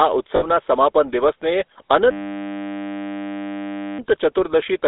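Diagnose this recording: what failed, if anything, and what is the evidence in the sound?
The codec stage is at fault for the whole clip. The speech has the buzzy, gravelly roughness of the GSM full-rate codec, with a hard band limit from about 300 Hz to 3.7 kHz. The codec rebuilds the voice from a vocal-tract model driven by a sparse, regular pulse train, and that coarse excitation causes the grit. This differs from plain narrowband telephone filtering, which dulls the voice without adding this rasp. The damage fits a 13 kbps full-rate stream.

From 2.11 to 3.99 s, the driver or buffer stage fails with a system hang loop. The sound collapses into a steady 100 Hz buzz because a single 10 ms buffer replays exactly, over and over, while the system is frozen and the hardware keeps cycling the same memory. Because the loop is this short, it sounds like a tone rather than a machine-gun stutter. 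Unlike a dropout or glitch, it replaces the sound with an identical repeat rather than with silence, and essentially no audio is lost.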